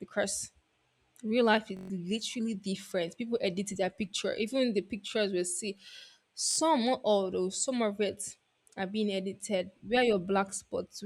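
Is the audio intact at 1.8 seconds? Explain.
No. A Bluetooth stutter runs from 1.77 to 1.90 s, between "real life is" and "literally different". Audio packets failed to arrive in time. The receiver kept replaying its last short buffer until fresh data came. That repetition makes a rapid buzzing, machine-gun stutter. About 128 ms of sound is lost, which fits roughly six dropped packets. Playback then resumes further on, as if the sound had kept going.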